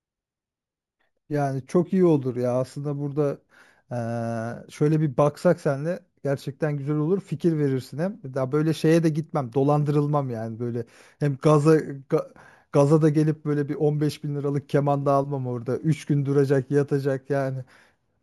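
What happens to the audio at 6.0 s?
Imaging from sample-and-hold upsampling runs through 6.0 s: samples were repeated without smoothing from 16 to 48 kHz, leaving mirrored spectra at 8 to 16 kHz, a metallic fizz about 26 dB below the speech.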